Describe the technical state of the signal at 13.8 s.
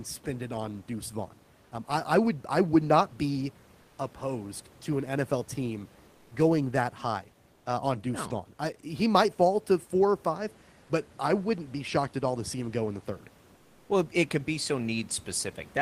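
Comfort noise in place of the background runs from 13.55 to 13.87 s. The sender likely paused transmission during silence, and the receiver substituted steady, featureless synthetic noise about 3 dB quieter than the real room noise.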